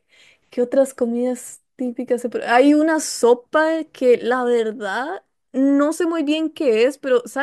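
No technical faults can be heard anywhere in this speech recording; the signal stays intact and continuous throughout.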